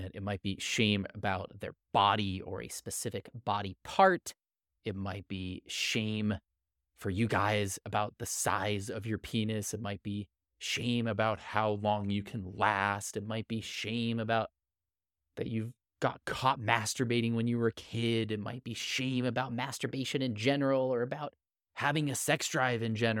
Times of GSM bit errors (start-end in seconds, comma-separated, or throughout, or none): none